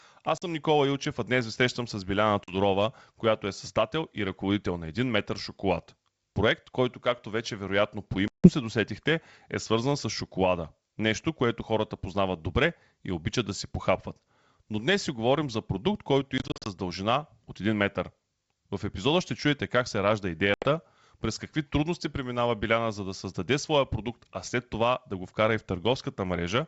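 Packet loss on an ADPCM call cuts hard-edged silent holes into the speech at 0.38 s and 2.44 s (40 ms each), at 8.28 s (160 ms), from 16.38 to 16.68 s (160 ms lost in short gaps of up to 40 ms), and at 20.54 s (80 ms). After each gap, the receiver's adaptive predictor and step size no longer match the sender's, so the speech resumes slightly distorted until the decoder re-converges.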